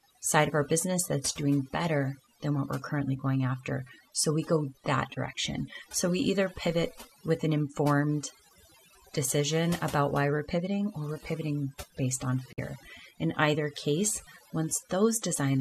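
Throughout the speech, overdone noise removal is audible. The suppressor was set too aggressively, so any frequency band close to its noise estimate gets pulled far down or switched off. Quiet speech components fall below that threshold and are removed along with the noise. The result is a background that drops away and breaks up into isolated twinkling specks, and a voice with its low-level detail stripped away.

At 12.52 s, right after "we're pivoting based on", there is a digital broadcast dropout lasting until 12.59 s. The receiver lost valid frames and muted, fading out in about 8 ms rather than cutting hard. Roughly 48 ms of programme audio is missing, which fits two lost frames. The sound resumes, and whatever fell inside the gap is gone rather than delayed.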